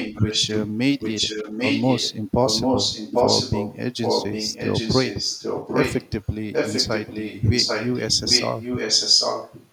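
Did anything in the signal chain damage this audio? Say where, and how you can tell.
Yes. A delayed copy of the speech trails the original by about 0.79 s throughout, from 0 to 0.71 s, 0.99 to 2.15 s, 2.39 to 3.77 s, 3.99 to 6.34 s and 6.52 to 9.7 s. It sits close to the level of the direct speech, and at times is as loud. This echo leak most likely comes from call processing: a far-end loudspeaker fed the microphone, and the echo canceller failed to subtract it before sending the signal back.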